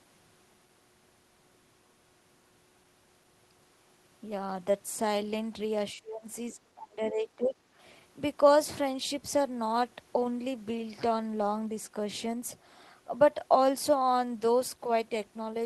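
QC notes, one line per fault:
5.93–6.25 s, 6.52–6.59 s and 6.75–7.55 s: speech suppressed in double talk. The echo canceller likely could not separate the near-end talker from the far-end echo and turned the near end down. The speech ducks by about 25 dB and 20 dB in the first and last stretches, and only slightly in the brief middle one.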